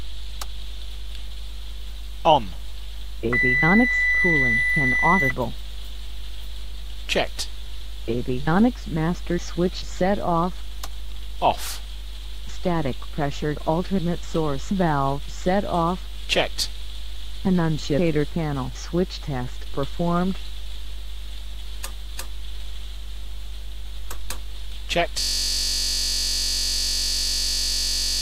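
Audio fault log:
25.2 s to end, system hang loop: a 21.33 ms slice repeats exactly, buzzing at 46.9 Hz as a frozen driver leaves the hardware recycling one buffer, fitting 1024 samples.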